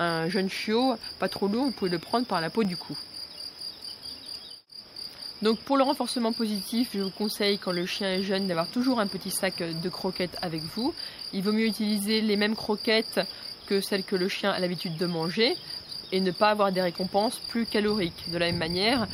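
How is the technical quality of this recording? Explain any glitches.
Five isolated clicks mar the recording, at 2.65, 4.35, 6.63, 8.54 and 11.77 s. Each is a single sharp tick, most likely from dropped samples: a tiny run of audio, about 0.7 ms, goes missing, so the waveform leaps abruptly from one value to a later one. Nothing audible is lost, but that discontinuity shows as a step in the waveform and a thin vertical line spanning the whole spectrogram at each of those moments.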